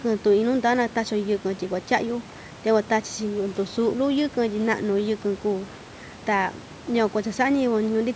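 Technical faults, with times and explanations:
No technical faults can be heard in this speech clip. The call microphone processing leaves nothing above 8 kHz and trims the lowest bass, and the room noise sits about 21 dB below the speech.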